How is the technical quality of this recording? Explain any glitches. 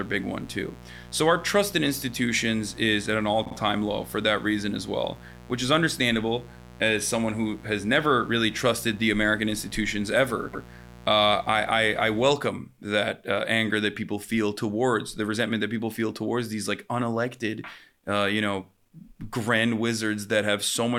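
The recording has two audible problems: a mains buzz over the first part of the speech and two short stutters from repeated frames.

Mains buzz runs from the start to about 12.3 s, sitting roughly 20 dB below the speech. It is a steady, raspy buzz built on a 60 Hz fundamental. Sharp switching spikes from a dimmer, rectifier or an unshielded line entered the signal path twice per mains cycle, and those spikes carry harmonics of 60 Hz well up into the kilohertz range. That is why it rasps rather than hums. It stops at 12.3 s.

Repeated frames cause two stutters. From 3.45 to 3.54 s, a 48 ms stretch plays three times in a row, adding 96 ms. That fits a block of two compressed frames being written or sent again. From 10.53 to 10.65 s, a 120 ms stretch plays twice, adding 120 ms, consistent with a five-frame block. In each case the decoder received duplicate frame data and played the same slice of audio again. 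This produces a brief stammer and lengthens the recording by the repeated time.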